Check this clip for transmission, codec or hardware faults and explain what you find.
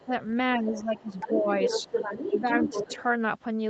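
Two faults affect this speech, both tied to echo cancellation; the Opus call path's 8 kHz ceiling is expected.

Other side's voice leaking through: a second voice sits faintly under the speech at 0.00–0.06 s, louder at 0.73–0.99 s, and nearly level with the talker from 1.17 to 3.02 s, likely from loudspeaker echo the canceller missed.

Speech suppressed in double talk: the talker's level sinks by roughly 10 dB at 0.06–0.11 s and through 0.56–1.49 s, likely because the canceller ducked everything while both sides spoke.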